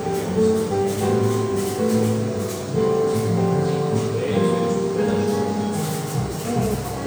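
Nothing goes wrong anywhere in this little stretch of sounds; you can just sit back and listen.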